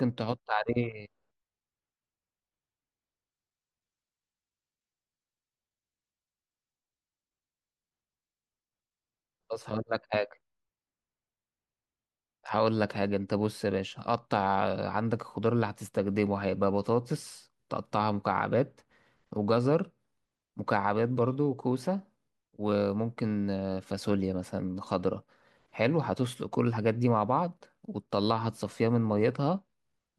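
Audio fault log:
No faults are heard anywhere in this speech recording. Nothing in the audio calls for an entry in this log.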